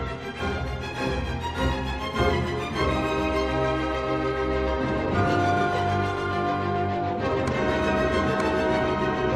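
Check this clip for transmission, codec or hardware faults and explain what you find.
I found no faults to report in this clip.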